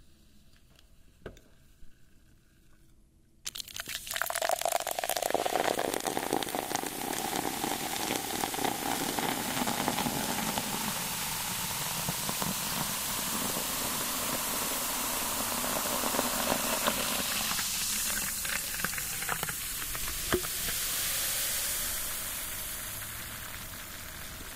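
Nothing goes wrong anywhere in the audio; there isn't a single technical fault to point to from the first moment to the last.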